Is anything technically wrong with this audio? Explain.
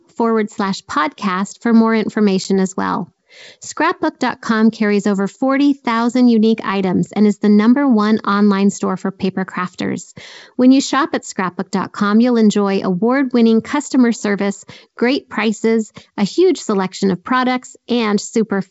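Yes. Packet loss on an ADPCM call hits at 2.44 to 2.46 s, where about 10 ms of audio, a single packet's worth, drops out and is filled with silence. Because the decoder's adaptive predictor and step size keep evolving from what they last received, they fall out of line with the sender's during the gap. The speech cuts off with a hard edge, then resumes with slight distortion until the decoder resynchronises. The G.722 wideband coding at 64 kbit/s keeps its clear upper range around the gap.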